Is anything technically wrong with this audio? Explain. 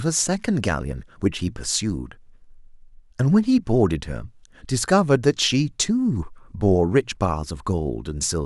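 No, nothing technically wrong can be heard here.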